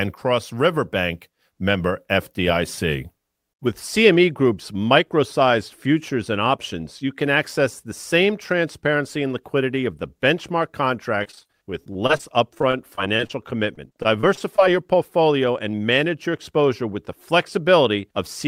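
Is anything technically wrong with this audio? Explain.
Yes. Twice the transmission repeatedly lost or delayed packets, causing repeated packet loss (robotic sound). The first burst runs from 11.23 to 13.31 s, just after "liquidity of the benchmark", with about twenty holes, the longest around 35 ms, patched over roughly a sixth of that stretch. The second runs from 13.75 to 14.60 s, with a handful of holes up to 22 ms. Each hole is filled by stretching the preceding sound, so the speech turns choppy, with fragments missing.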